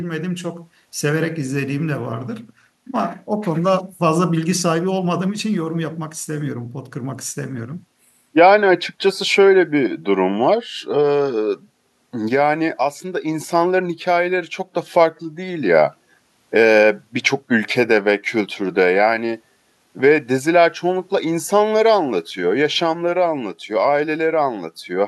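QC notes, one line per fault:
No faults heard anywhere in this speech recording.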